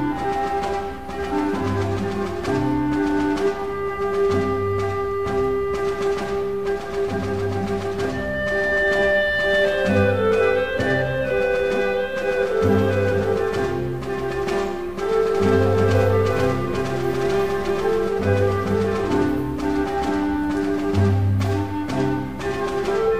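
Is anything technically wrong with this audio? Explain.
Yes, there's a doubled audio track from about 15.35 to 18.09 s: a second copy sits roughly 400 ms behind, about as loud as the original, with no decay, and it cuts in and out abruptly. That's likely a slower capture path picking the sound up twice.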